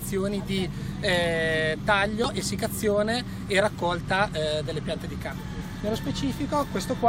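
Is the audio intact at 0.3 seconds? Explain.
Yes, the audio is intact at 0.3 seconds, with no dropout, click, distortion or other fault at that moment.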